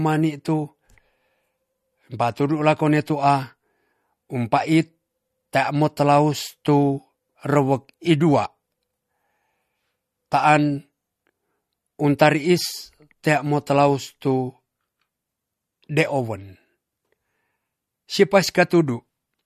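From start to finish the speech has nothing above about 13.9 kHz and a plainly watery, swirly quality on the s sounds. That's likely MP3 compression, with weak frequency lines flickering on and off between frames, which fits a low bitrate around 48 kbps.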